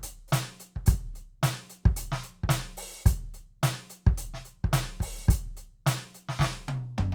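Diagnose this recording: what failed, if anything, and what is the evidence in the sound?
Nothing failed here as far as I can hear: the music runs along without any dropouts, glitches or distortion that would point to trouble at any stage of the chain.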